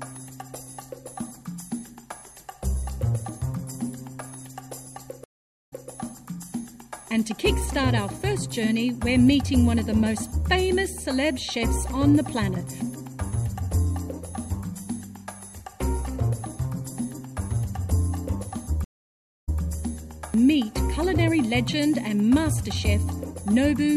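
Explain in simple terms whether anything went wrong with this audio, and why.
Two stream reconnects occur, at 5.24 to 5.89 s and 18.84 to 19.62 s. The connection dropped, causing about 0.46 s and 0.62 s of silence, then the player restarted and resumed slightly earlier, repeating about 0.18 s and 0.16 s of sound.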